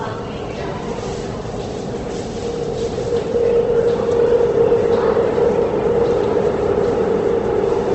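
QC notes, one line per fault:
Throughout: Opus compression, likely. Nothing is present above 8.1 kHz, so the top end sounds dull. Tones turn grainy, rough and noisy because starved bands are refilled with folded or noise content. The damage is plainly audible and fits a wideband stream near 16 kbps.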